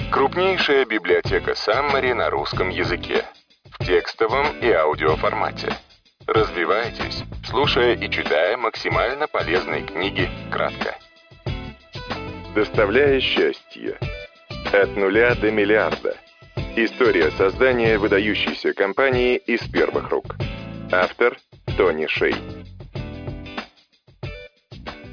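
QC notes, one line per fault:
Nothing stood out on listening, and there is nothing to note for this clip.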